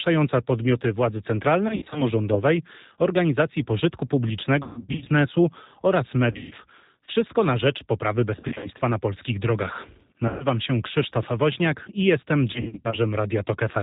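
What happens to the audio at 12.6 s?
Packets were dropped from 12.53 to 12.98 s, just after "i jestem": about 200 ms lost in scattered gaps, the longest 60 ms. The decoder's packet loss concealment fills them by extending its last pitch and filter, so the speech smears into a fading buzzy tone or coloured noise and stays weak as it recovers. Throughout, the 8 kbit/s G.729 codec strips everything above 4 kHz, leaving the speech rough and synthetic.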